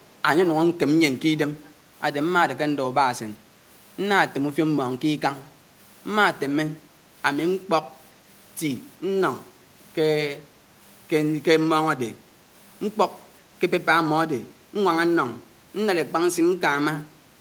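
Echo leak in this speech clip at 0.03 to 0.09 s and 1.65 to 1.70 s: a faint copy of the talker returns about 388 ms late, roughly 35 dB below the speech, likely from a far-end loudspeaker whose echo canceller let short scraps through.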